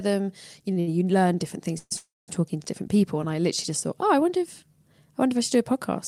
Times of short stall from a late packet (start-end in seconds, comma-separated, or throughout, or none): 0.73-0.89